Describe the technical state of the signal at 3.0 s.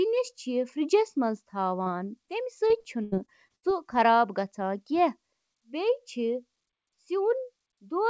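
At 3.0 s the speech sits inside a stretch of repeated packet loss (robotic sound) running from 2.68 to 3.65 s. Six gaps fall in that span, the longest about 79 ms. Each is covered by extending the previous fragment of sound, so roughly a quarter of the span is concealment rather than real signal. The result is choppy, with pieces missing, heard over band-limited audio with nothing above 8 kHz.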